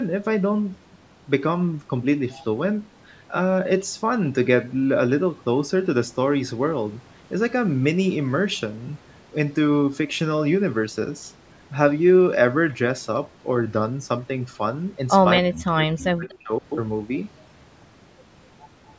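Speech runs through call processing, and from 15.4 to 16.52 s the voice dips and breaks up in pieces, falling by about 40 dB at its deepest for around a second in total. This is likely speech suppressed in double talk: with both sides talking at once, the echo canceller could not tell this talker from the loudspeaker echo and turned everything down. Inside that stretch, from 16.29 to 16.38 s, a faint scrap of voice arrives 241 ms late at about 30 dB below the speech, likely an echo leak where the far side's canceller let some of its loudspeaker pickup return down the line.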